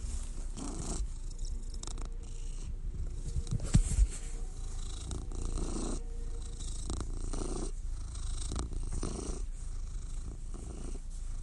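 No technical faults are audible.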